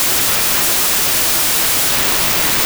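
A speech recording with a wrong sample width throughout: 16-bit data read as packed 24-bit, so bytes from adjacent samples merge into loud noise hiding the speech, which plays 1.5 times too fast and high. A plain sample-rate error would shift speed without that noise.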